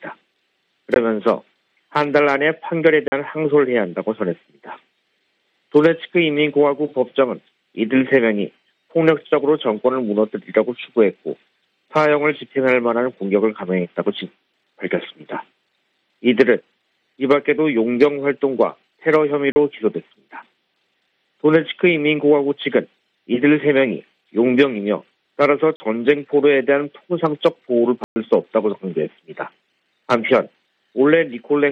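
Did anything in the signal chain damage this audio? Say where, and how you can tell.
Yes: blocks of digital silence at 0.94 s, 3.08–3.12, 19.52–19.56, 25.76–25.80 and 28.04–28.16 s. The sound drops abruptly to silence and back, which points to output buffers left unfilled.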